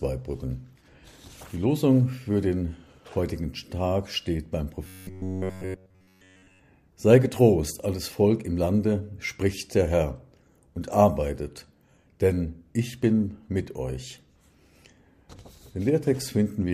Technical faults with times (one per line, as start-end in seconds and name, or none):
4.85-6.59 robotic sound from repeated short buffers